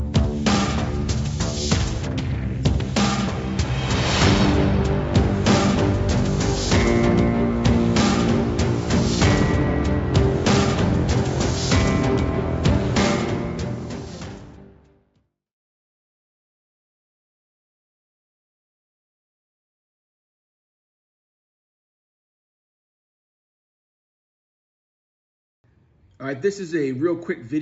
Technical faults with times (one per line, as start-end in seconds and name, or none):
none